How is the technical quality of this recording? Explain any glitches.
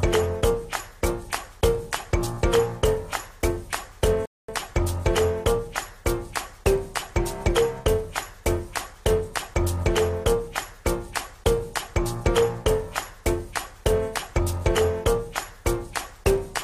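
One glitch stands out: a playback stall from 4.26 to 4.48 s, where the sound cuts out for about 0.23 s and then resumes, likely because the player ran short of data. On a waveform and spectrogram it shows as a flat, empty gap.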